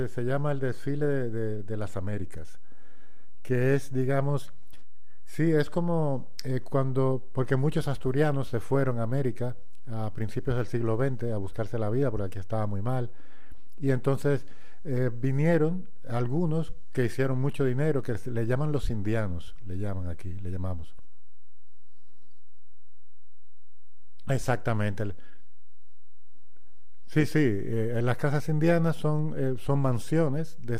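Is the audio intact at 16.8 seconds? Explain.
No. A DC offset of about -27 dBFS runs through the whole speech clip, including 16.8 s. The waveform sits shifted off zero. It is inaudible but eats headroom.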